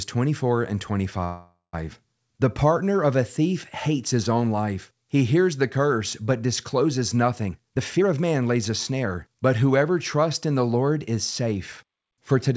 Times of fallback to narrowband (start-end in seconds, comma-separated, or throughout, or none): none